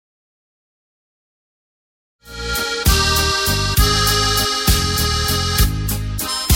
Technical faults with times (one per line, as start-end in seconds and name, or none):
none